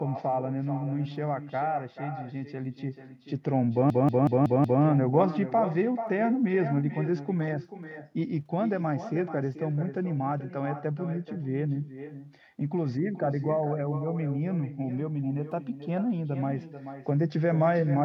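A speech recording with two faults. Throughout, an echo with no canceller shadows every phrase with a quieter copy, about 12 dB down and arriving roughly 0.4 s later. It sounds thinner than the original because the far end's loudspeaker is picked up by its microphone and sent back over the network uncancelled. Unlike room reverberation, which smears continuously into the tail of each sound, this is a distinct, delayed repeat.

From 3.90 to 4.83 s, a system hang loop replays the same 186 ms fragment five times, at a rate of about 5.4 Hz, producing a machine-gun stutter. The fragment length fits an 8192-sample ring buffer that the audio hardware kept cycling while the computer or driver was frozen. Afterwards the speech resumes with little or nothing missing. What separates this from a dropout or underrun is that the audio does not go silent or glitch at random. One identical fragment repeats exactly, at a fixed rhythm.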